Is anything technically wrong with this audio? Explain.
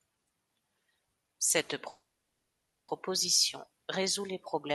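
Yes. A call audio freeze runs from 1.89 to 2.90 s. The speech stops and a short continuation of the last sound fades out, leaving about 0.86 s of silence before the speech resumes where it left off, with nothing lost. The cause is likely a stall in packet delivery that emptied the jitter buffer, so the receiver filled the wait and everything after it arrives about 0.99 s late. The call codec limits the band to about 12 kHz throughout.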